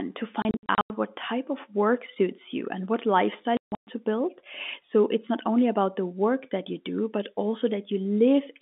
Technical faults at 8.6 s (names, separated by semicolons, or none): none